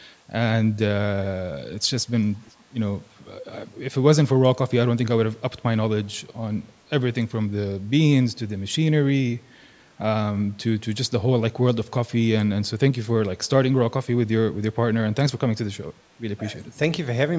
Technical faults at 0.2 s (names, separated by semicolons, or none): none